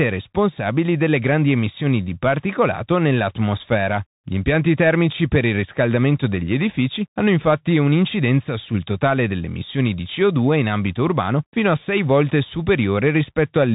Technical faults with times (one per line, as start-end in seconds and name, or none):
0.00-13.74 Bluetooth CVSD headset codec